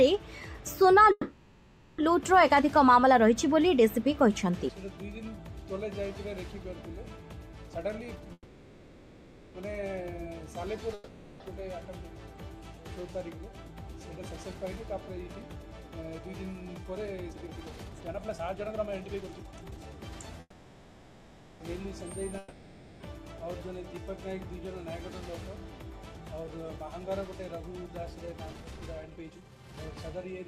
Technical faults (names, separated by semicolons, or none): call audio freeze; jitter buffer speed-up; long network dropout